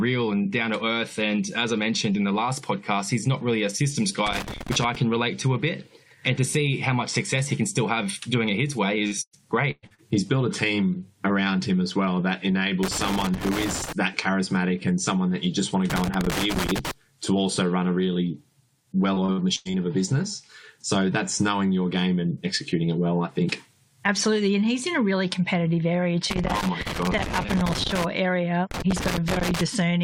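Loose connector crackle, 4.27 to 4.95 s: a worn or dirty contact is making and breaking as it shifts, chopping the signal on and off, so the sound breaks into an irregular scratchy crackle for under a second.

Short concealed packet loss at 9.07 to 9.14 s: about 40 ms of audio failed to arrive in time, and the receiver bridged the gap by extending the preceding sound before blending back in. It is heard as a brief smear or wobble.

Burst of packet loss, 9.22 to 9.35 s and again at 9.71 to 9.85 s: roughly 120 ms went missing each time. The receiver stretched the last sound into a held buzz or hiss and faded it down, with about 70 ms and then 30 ms of near silence. Playback then resumes further along, with the audio in between gone.

Two more short concealed packet losses follow at 9.87 to 9.92 s and 9.94 to 10.00 s, each about 40 ms, adding quick smears to the end of this cluster.

Loose connector crackle returns at 12.83 to 13.93 s and 15.90 to 16.91 s, again as bursts of rough crackle where the contact keeps breaking.

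Repeated packet loss (robotic sound), 19.14 to 19.75 s: five gaps arrive in quick succession, the longest about 94 ms and about 220 ms in total. Each gap is patched from the preceding sound just before the next one starts, and the patching fills about a third of this stretch. The result is choppy, with pieces of the audio missing.

Loose connector crackle appears a final time at 26.30 to 28.04 s and 28.71 to 29.61 s. The first of these is the longest crackle burst in the clip, with the same intermittent scratching.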